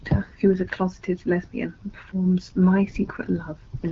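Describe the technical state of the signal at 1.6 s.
At 1.6 s the signal is intact, with the speech passing through the AMR wideband (HD Voice) path as normal and no fault present at that moment.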